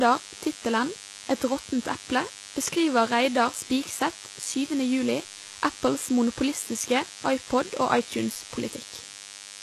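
From start to finish a steady, thin 100 Hz buzz rich in harmonics sits roughly 15 dB under the speech. This is DECT cordless phone buzz, from a nearby handset's 10 ms radio bursts being rectified. Throughout, the speech also carries plainly audible codec damage, with nothing above 12.3 kHz. The likely cause is HE-AAC compression at a rate that fits about 16 kbps, with upper frequencies synthesised from copied lower bands rather than kept.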